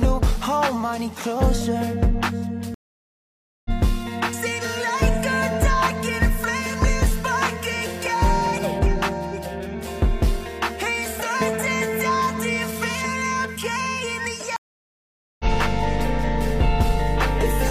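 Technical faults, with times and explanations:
2.74–3.71 s and 14.56–15.45 s, stream reconnect: the sound stops dead for 0.91 s and then 0.83 s, and each time picks up roughly half a second and roughly 0.7 s further on than where it broke off, because the link dropped and a new decoder joined the live stream mid-flow. Unlike a plain dropout, which leaves a hole and carries on from the same point, the missing stretch of material gives the reconnection away.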